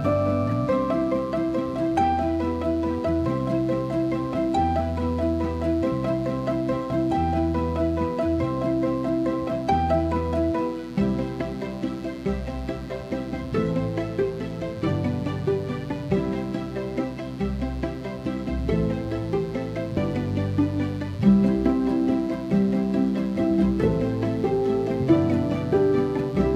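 A raspy mains buzz, about 20 dB below the sound, runs throughout, built from 60 Hz switching spikes: a spectrogram shows stacked harmonic lines reaching several kHz.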